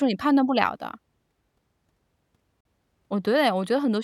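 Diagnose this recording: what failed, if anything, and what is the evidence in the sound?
At 2.61 s the speech cuts to a 46 ms silence with smeared edges, then resumes. This is a codec-stage gap at a join of encoded pieces, left by untrimmed encoder delay and padding.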